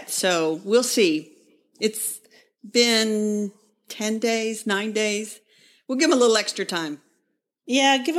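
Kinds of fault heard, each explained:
Nothing stood out on listening to this speech recording.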